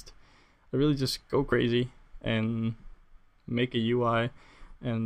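At 1.51 to 1.53 s there is a case of compressed frames skipped. Whole frames of the encoded stream were not played, either missing from the file or rejected by the decoder as corrupt. Playback jumps forward by about 20 ms of audio. At the splice the sound briefly lurches ahead.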